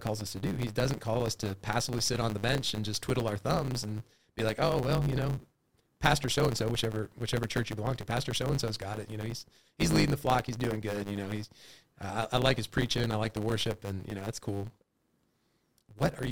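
Speech runs from start to finish with a block size mismatch (truncated): one stage writes longer blocks than the next reads, so each block's tail is dropped, which fits 512-sample blocks. The splices leave a 100 Hz buzz, and delivery runs 1.16 times fast at roughly normal pitch. On a spectrogram, vertical striations repeat every 10 ms with a comb of 100 Hz harmonics; the waveform shows small jumps at the same spacing.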